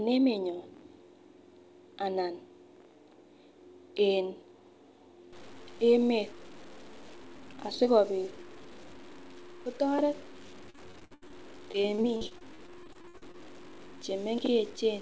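Speech, carried over a call path whose spectrum stops at 8 kHz, turns grainy from 5.33 s to the end. Quiet passages gain a gritty, signal-following distortion roughly 25 dB below the speech, and the faintest parts sputter or drop out. The likely cause is low bit depth without dither, consistent with truncation to about 7 bits. On a waveform, quiet stretches show visible stair-steps. On a spectrogram, the noise tracks each syllable instead of forming a steady floor. Repeated packet loss makes the sound choppy and robotic from 10.70 to 11.32 s and again from 11.72 to 13.36 s. Short holes, the longest about 72 ms and 57 ms in the two stretches, are patched by stretching the preceding sound. The spectrogram shows smeared, repeated frames with abrupt edges, and the waveform shows looped fragments.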